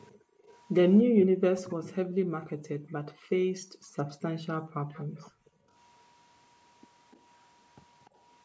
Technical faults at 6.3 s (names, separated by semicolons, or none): none